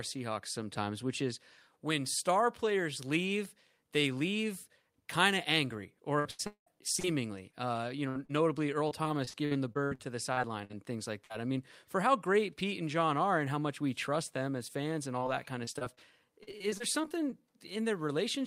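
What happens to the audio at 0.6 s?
Nothing goes wrong at 0.6 s; the speech at that moment plays through intact, with no audible fault.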